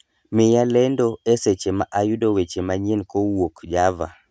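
A speech recording, with nothing technically wrong with it.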